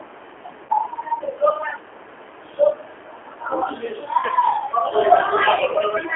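Across the whole clip the speech carries the rough, slightly synthetic texture of the G.729 codec, which fits an 8 kbit/s G.729A stream. It rebuilds the voice from a filter, pitch predictor and sparse pulses, confined to a 300 Hz to 3.4 kHz line band.

VoIP packet loss concealed by the speech codec occurs at 0.65 to 0.71 s, where about 40 ms is lost. It occurs again at 4.17 to 4.31 s, where about 70 ms of gaps are scattered over 120 ms, the longest run 30 ms. A final brief one comes at 5.74 s. Each time, the decoder stretches the last pitch and filter into a fading buzzy tone or coloured noise, and the voice stays weakened briefly afterwards.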